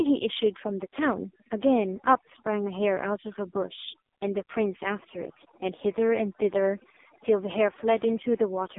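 From start to finish the speech carries overdone noise removal: a suppressor set far too aggressively has pulled individual frequency bands down or out wherever they sat near its noise estimate, so pauses fall to near silence flecked with twinkling specks. A spectrogram shows a blank floor scattered with isolated bright dots, and speech harmonics broken into gaps.

Running throughout as well is the AMR narrowband mobile codec. The audio sits in a telephone band of roughly 250 Hz to 3.6 kHz, with nothing above 3.7 kHz, and the heavy buzzy, synthetic coloration points to a very low AMR-NB mode around 5 kbps. On a spectrogram the energy ends in a hard ceiling, with smeared, blocky harmonics below it.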